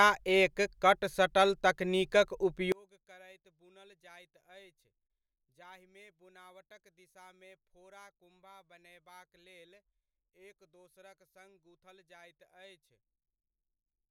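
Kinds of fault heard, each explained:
One channel inverted: Likely one stereo channel had its polarity reversed, so when the two are combined the shared centre content cancels; from 2.72 s to the end the speech collapses by about 32 dB into a faint residue.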